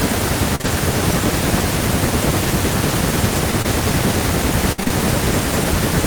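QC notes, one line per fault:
0.55–0.65 s, short concealed packet loss: two back-to-back 20 ms holes, patched over about 60 ms, with the delay shifting by roughly 20 ms. The receiver stretches the preceding sound forward and blends back into real audio, leaving a brief smear or wobble.
0.65–0.67 s, lost packet rebuilt from error correction: one 20 ms packet went missing, but the next packet carried a low-bitrate copy, which the decoder played instead. There is no gap, though this 20 ms frame sounds rougher and noisier than its surroundings.
3.62 s, short concealed packet loss: a single 20 ms hole, filled over about 21 ms. The decoder continues the previous sound through the missing stretch and then crossfades into the returning audio, producing a short smear rather than silence.
4.72–4.92 s, repeated packet loss (robotic sound): four gaps totalling 120 ms within about 0.19 s, the longest 56 ms, so 58% of the span is concealed. 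Each patch extends the last sound before the next hole arrives, giving choppy audio with pieces missing.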